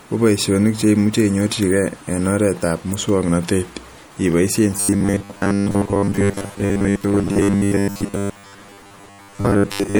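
Speech with a watery, swirly quality throughout, the treble dulled and sibilants chirping metallically, with plainly audible damage that is likely MP3 compression at a low bitrate, around 64 kbps. The encoder cuts the highs and lets weak frequency lines flicker between frames. From 4.77 s to the end, the voice hardens into a rigid, metallic buzz at about 100 Hz: robotic sound from repeated short buffers, likely caused by audio arriving too seldom, so roughly 10 ms fragments are replayed over most of that stretch.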